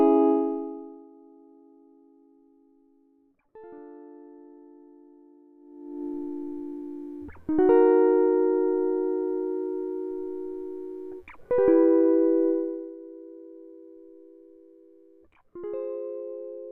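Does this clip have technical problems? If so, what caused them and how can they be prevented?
No, this clip has no technical problems, so there is nothing to prevent.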